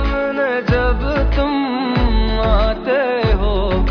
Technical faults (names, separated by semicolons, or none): none